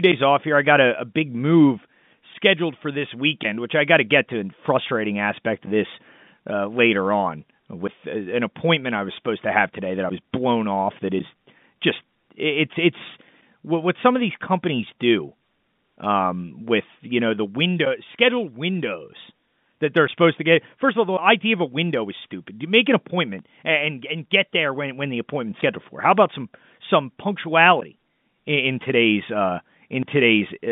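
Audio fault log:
Nothing stood out on listening to this speech, which comes over the narrow band of G.711 telephone coding.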